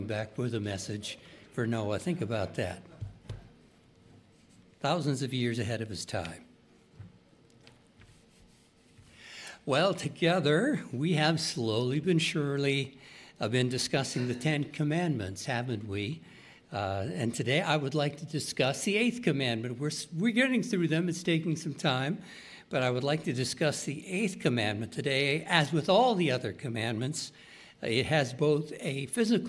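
Listening through the whole recording, nothing stood out as a technical problem at any point.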